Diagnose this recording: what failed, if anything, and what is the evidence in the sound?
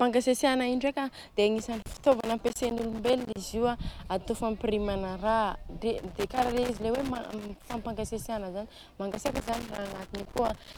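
Loose connector crackle in the analogue wiring at 1.58–3.37, 5.98–7.78 and 9.12–10.78 s: an intermittent contact chops the speech, showing as irregular waveform dropouts, spikes and broadband vertical spectrogram streaks.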